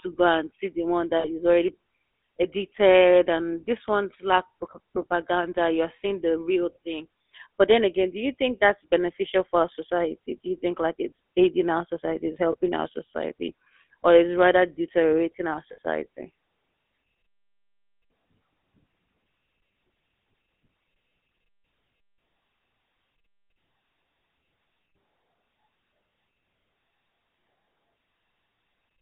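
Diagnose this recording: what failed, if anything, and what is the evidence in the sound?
Throughout, the speech has a buzzy, gravelly roughness and is confined to roughly 250 Hz to 3.6 kHz. This is the GSM full-rate codec: a vocal-tract model driven by sparse, regularly spaced pulses, which fits a 13 kbps stream.

Short rough, metallic rings replace the speech at 1.20–1.27 s after "and see the one", 12.52–12.56 s after "aiding our society it's", and 15.72–15.78 s after "is rather deteriorating our". These are lost GSM frames on the network, concealed by repeating the last good frame.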